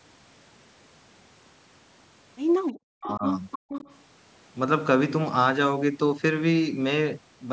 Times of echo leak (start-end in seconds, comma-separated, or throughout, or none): 2.67-2.72, 3.05-3.15, 3.51-3.97